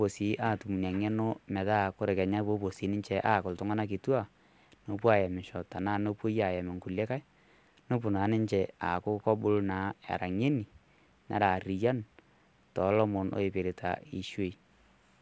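Speech, with no technical faults to be heard.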